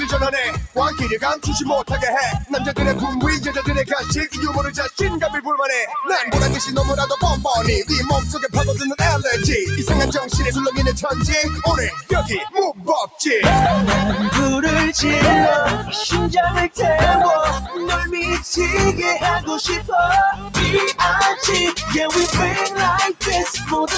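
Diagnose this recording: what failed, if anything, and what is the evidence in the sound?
The failure sits in the call processing stage: a noise suppressor built for voice was applied to music or sounds. It treats steady, sustained material as noise, so held parts and tails keep dipping a few dB while attacks pass, giving a restless, pumping level. The bandwidth tops out around 8 kHz, as expected from call processing.

Eight places show the sound cut by the noise suppressor: 0.66–1.01 s, 3.84–4.43 s, 4.7–5.0 s, 11.96–12.11 s, 12.73–12.88 s, 20.33–20.57 s, 21.75–21.92 s and 23.49–23.72 s. Here it clamps much harder, up to about 15 dB, so sustained content briefly sinks or gets its decay chopped.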